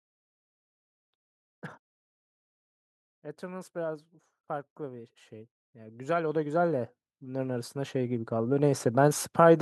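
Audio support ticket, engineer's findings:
Automatic gain rising, 3.4 s to 8.6 s: speech and background noise floor swell together, about 19 dB overall. AGC judged input too quiet and ramped gain slowly. Waveform: envelope widens steadily. Spectrogram: whole band brightens, noise included.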